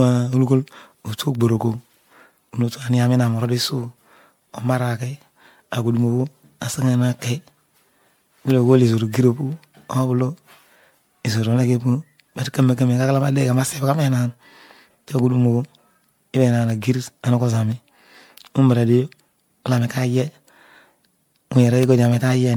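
Across the whole speech clip the sound is swirly, smeared and hollow, with blurred consonant attacks and nothing above 19.9 kHz. This is generation loss, likely from about seven successive MP3 passes near 96 kbit/s, each requantising on a shifted frame grid so the artefacts accumulate.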